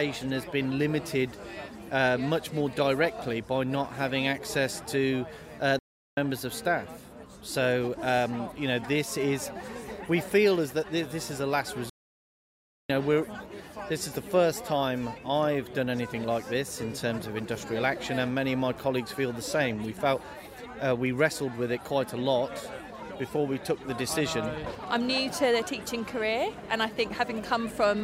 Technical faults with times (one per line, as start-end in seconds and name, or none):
5.79-6.17 playback stall
11.89-12.90 playback stall